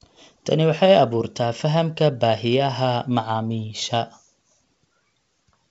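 Nothing's wrong with this speech clip: it simply sounds like a wideband G.722 telephone line at 56 kbit/s, with the light coding texture you'd expect and nothing above roughly 7.7 kHz.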